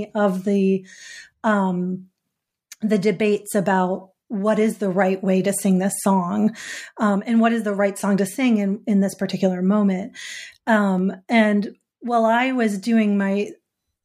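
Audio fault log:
10.99 s, dropped samples: right before "and while I was" there's a single sharp click. It sounds like a handful of samples went missing, a tiny fraction of a millisecond, so the waveform jumps straight from one value to a later one instead of moving smoothly between them. That sudden step spreads energy across the whole spectrum at once, which is why you hear a click and see a thin vertical line. Nothing audible is lost; the gap is far too short.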